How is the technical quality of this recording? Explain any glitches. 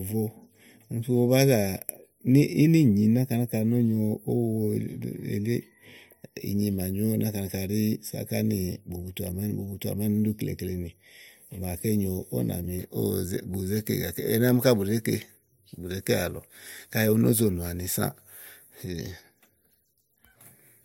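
One fault affects the first part of the recording. Channel delay (comb filtering), 0.0 to 12.8 s: one channel lags by a fraction of a millisecond, so summing to mono cuts notches from roughly 1.5 kHz, leaving the speech hollow.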